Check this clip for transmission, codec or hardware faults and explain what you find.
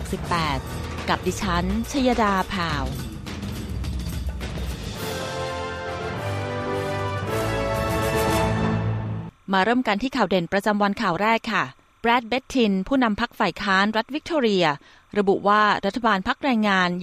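One fault runs through the whole clip: timecode bleed. A faint, steady chirping warble sits behind the sound from start to finish, roughly 40 dB below it. Linear timecode from a nearby track or cable is leaking into the audio path. The code is a square wave that flips between two pitches, near 1 and 2 kHz, as its bits change. Its pattern repeats at 30 frames per second, which gives the warble its fast, rhythmic flutter.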